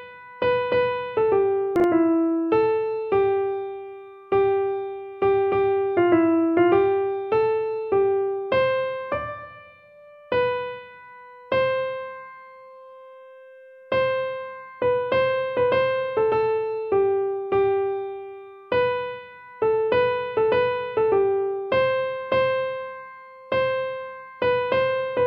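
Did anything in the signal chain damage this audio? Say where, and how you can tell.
Yes, there's one spot, at 1.76 to 1.84 s, where the audio has chunks out of order. It's a buffer-stage problem: a 40 ms block got written one slot late, so it plays after the block that should follow it. Nothing goes missing, but that 80 ms stretch sounds briefly jumbled, with three hard joins where mismatched waveform edges butt together.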